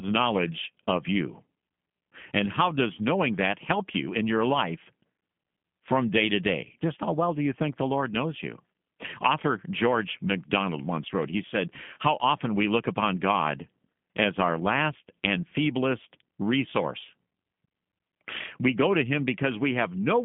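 G.729 codec coding runs through the whole speech clip, which points to roughly 8 kbit/s G.729A. Speech is rebuilt from a vocal tract filter, pitch predictor and sparse pulses, so it sounds plainly rough and synthetic, confined to a 150 Hz to 3.4 kHz line band with nothing above 3.6 kHz.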